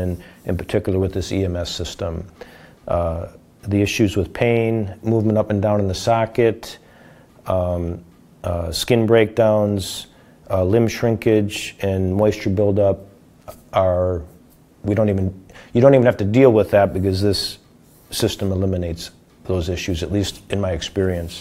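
A loud pop arrives at 18.20 to 18.22 s, a single sharp, brief burst that stands roughly 10 dB above the surrounding level while the sound carries on unbroken beneath it. A sudden voltage step or pulse has been added to the signal, most likely a jolt from a plug, switch, static discharge or driver glitch. The stages after it round the impulse into a short thump-like click before it dies away.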